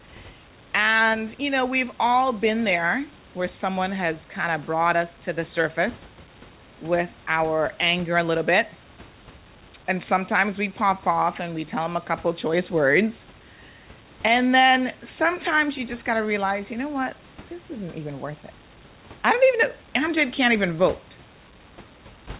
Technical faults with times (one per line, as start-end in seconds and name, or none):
none